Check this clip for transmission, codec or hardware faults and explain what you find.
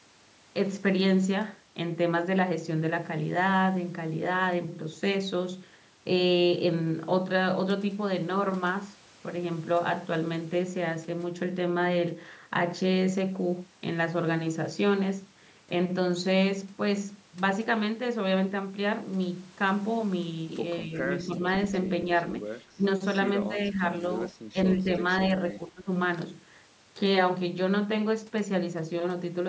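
The speech is repeatedly pulled down between 20.85 and 25.87 s, at 20.85, 21.26, 22.75, 23.48, 23.73, 24.32 and 25.53 s. This is likely speech suppressed in double talk: an echo canceller mistaking overlapping far-end talk for echo and attenuating both. Most dips are slight, around 5 dB, but at 22.75, 24.32 and 25.53 s the speech drops much deeper for up to about a third of a second.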